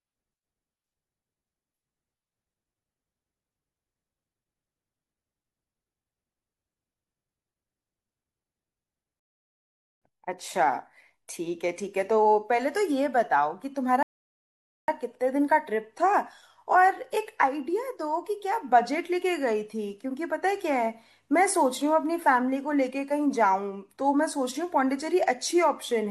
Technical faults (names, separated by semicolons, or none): rebuffering stall